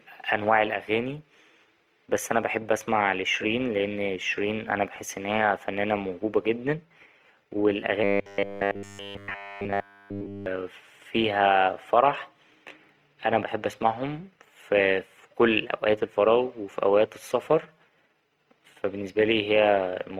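From the start and running the whole way through, the speech has a grainy, rough texture, likely from Opus compression working at a tight budget, which fits a rate around 24 kbps in its music-style CELT mode. The top end isn't trimmed; the audio stays fullband. But with too few bits to go around, the encoder keeps each band's energy and patches in the missing detail with folded or noise-like content. So voiced sounds come across sandy and rough.

Then from 8.04 to 10.46 s things get much worse. The voice turns into a stiff, metallic buzz locked at 100 Hz that loosely follows the speech. That's likely robotic sound from repeated short buffers: new audio stops arriving in time, and the playback keeps looping a short slice instead, with essentially all of that stretch made of repeats. A 100 Hz buzz matches a slice about 10 ms long. The real audio in that window is skipped while the loop plays, hence the rigid pitch.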